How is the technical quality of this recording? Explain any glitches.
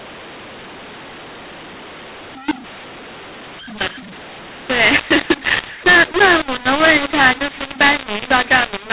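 The recording is badly compromised from start to finish by a decoding error, layered over ordinary telephone-band G.711 coding with nothing above 4 kHz.

Mu-law and A-law mixed up, throughout: speech encoded with mu-law is being decoded as A-law, so the 8-bit codes map to the wrong levels. Loudness is scrambled, quiet samples jump well above silence, and the speech turns harsh and distorted, with noise filling the pauses.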